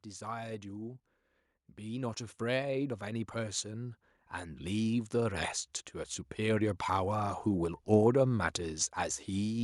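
From 1.8 s to 5.56 s the automatic gain rises by about 8 dB as the control treats the input as too quiet. Unlike a speaker moving closer, the background noise swells steadily along with the speech, because the whole signal is amplified.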